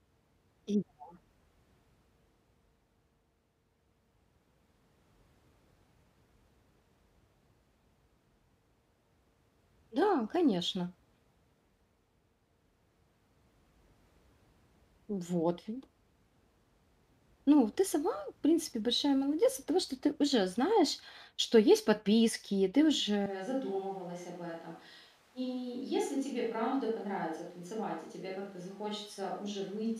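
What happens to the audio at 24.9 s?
You're in a switch to a distant microphone from 23.26 s to the end: speech abruptly turns roomy, hollow and about 10 dB quieter, likely from a failed close mic.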